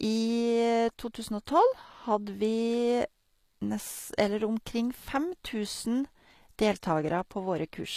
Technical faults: HE-AAC compression

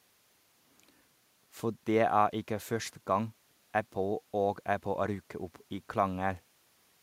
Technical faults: none

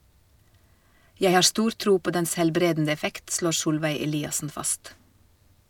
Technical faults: none

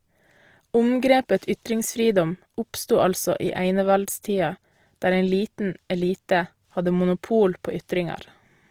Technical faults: Opus compression

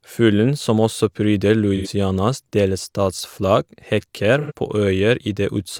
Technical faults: AAC frame loss with concealment

